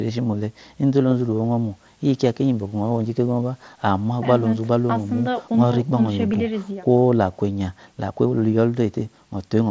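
At 1.44 s and again at 6.33 s, concealed Bluetooth headset packet loss drops one brief packet, refilled from the preceding waveform. Unlike a click or gap, each is nearly hidden, fitting a 7.5 ms packet.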